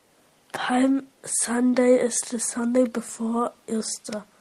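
Nothing in this recording stands out as a technical fault, so there's nothing to point to at any moment along the way.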